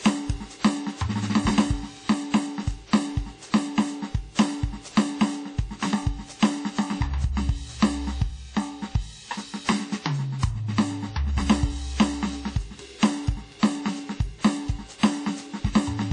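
Across the whole music clip, the sound rings and washes. A hiss breathes with the signal. Nothing reaches above 10 kHz. The cause is likely WMA compression, and the damage fits a bitrate near 32 kbps. Long transform blocks smear quantisation noise in time.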